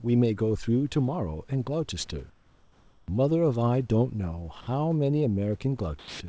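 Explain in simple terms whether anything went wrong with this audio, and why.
From 2.30 to 3.08 s there is comfort noise in place of the background. The real room sound in that pause turns into a flat, featureless hiss, a little quieter. Likely the sender stopped sending during the pause, and the receiver filled the gap with made-up noise.

Twice, speech is dropped by the voice detector. At 4.61 s a short piece, about 60 ms, vanishes into steady noise. From 5.99 to 6.20 s it happens again, and about 160 ms of speech is lost. The detector likely mistook part of the speech for background and stopped sending it.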